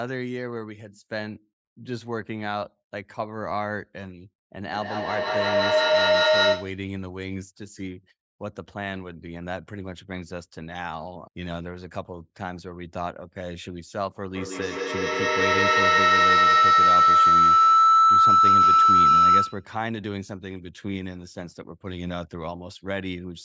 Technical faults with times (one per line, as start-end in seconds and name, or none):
4.71-6.90 feedback howl
14.32-19.75 feedback howl